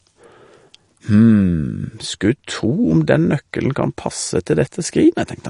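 Throughout the clip, nothing is present above 10.5 kHz, and the speech has a plainly audible watery, swirling texture. The likely cause is MP3 compression, at a rate that fits a low bitrate of around 40 kbps. With so few bits, the encoder cuts the treble at a fixed point. It also drops weak frequency components, which flicker on and off from frame to frame. S sounds turn metallic, and consonant onsets blur.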